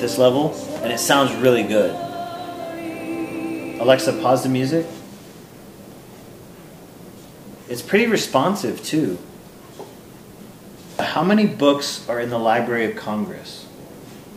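A sharp click sounds at 1.45 s. Another follows at 7.99 s. Each is a single, instant tick with no gap around it. These are most likely dropped samples. A fraction of a millisecond of the stream goes missing each time. The waveform jumps straight from one value to a later one. That step makes the click. Nothing audible is lost. A spectrogram shows each as a thin vertical line.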